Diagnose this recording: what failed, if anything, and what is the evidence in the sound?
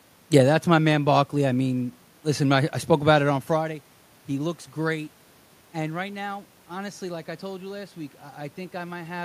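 Nothing in the chain has failed: the steady background is the room's own noise picked up at the microphone, and the level changes at about 3.5 s and again near 9 s come from the talker moving relative to the mic.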